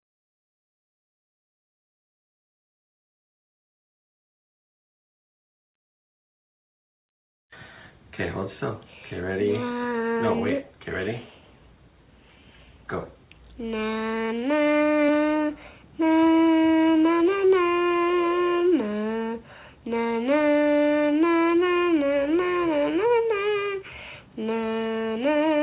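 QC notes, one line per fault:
No faults found; the audio comes through a WebRTC call path, which fits G.711 mu-law at 64 kbps with nothing above 4 kHz.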